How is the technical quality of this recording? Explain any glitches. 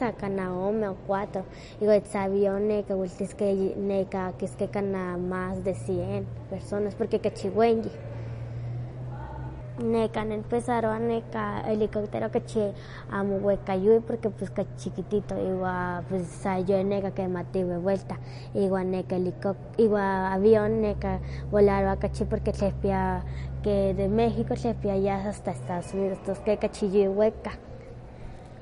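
Technical quality is compromised by plainly audible lossy coding across the whole speech recording. MP3 compression is the likely cause, consistent with a bitrate around 40 kbps: the treble stops at 10.6 kHz, and weak frequency components flicker between frames, giving a watery, swirly texture.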